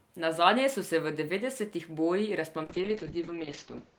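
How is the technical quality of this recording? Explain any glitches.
Quality falls near the end. From 2.65 s to the end, a call bitrate drop takes the codec from 32 to 7 kbps. The speech turns rough and muffled, and a spectrogram shows everything above 8 kHz abruptly cut off.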